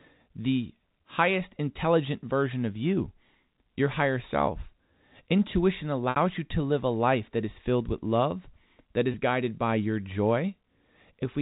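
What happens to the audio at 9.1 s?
At 9.12 s the sound briefly sticks, a slightly held, buzzy tone lasting until about 9.14 s before normal audio resumes. This is packet loss with pitch repetition. Roughly 20 ms of audio went missing, which fits a single dropped packet, and the receiver filled the hole by repeating the last pitch cycle it had. That looped waveform produces the brief buzz. The G.711 telephone coding carrying the call keeps everything below 4 kHz.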